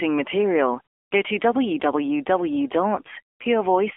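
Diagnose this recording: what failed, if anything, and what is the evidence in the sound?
Codec stage: AMR narrowband mobile codec throughout, buzzy and synthetic in a way that points to a low mode around 7.4 kbps. The spectrogram shows only 300 Hz to 3.4 kHz, because the line is band-limited to that range and the 8 kHz codec passes nothing above 4 kHz.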